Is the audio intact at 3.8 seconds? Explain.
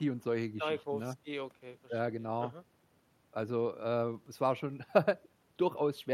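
Yes, the speech at 3.8 seconds plays through intact, with no dropout, click, distortion or other fault at that moment.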